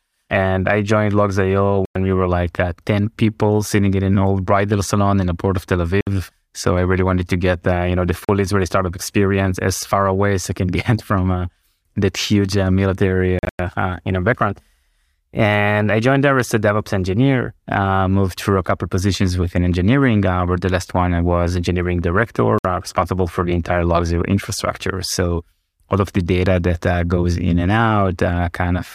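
Speech cuts to silence at 1.85 s for 0.10 s, 6.01 s for 0.06 s, 8.25 s for 0.04 s, 13.39 to 13.60 s in broken gaps (longest 0.10 s), and 22.58 s for 0.06 s. These are likely Bluetooth dropouts: packets arrived late and were discarded, and playback resumed further along.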